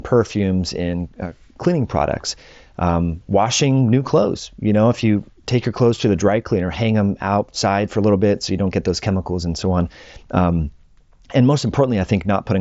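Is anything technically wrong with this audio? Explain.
No, nothing here is technically wrong: the speech arrives intact through what sounds like a wideband Bluetooth mSBC headset link, with content reaching up to about 7.7 kHz and nothing above that, which is expected for that path.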